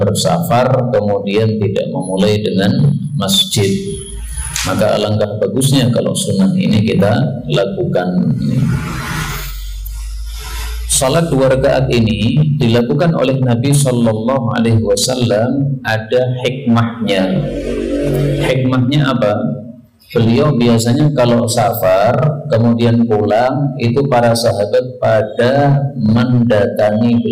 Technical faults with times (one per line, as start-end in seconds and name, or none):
0.00-27.32 hard clipping